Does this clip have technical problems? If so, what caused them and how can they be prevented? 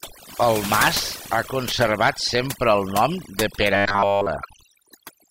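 Yes. Overdone noise removal affects the whole clip. Frequency bands near the noise estimate are pushed almost to silence. The background becomes near silence with twinkling specks. Prevent it by using gentler noise reduction settings.

From 3.76 to 4.26 s the speech becomes a rigid, metallic buzz at 100 Hz. The likely cause is robotic sound from repeated short buffers. A 10 ms chunk loops through that whole half second. Prevent it with enough buffering to deliver audio on time.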